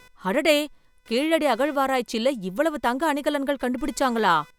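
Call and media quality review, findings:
Computer activity noise throughout: buzz pulsing near 500 Hz, roughly 35 dB under speech; computer load moving the shared ground. Spectrogram: faint harmonic comb, unrelated to speech.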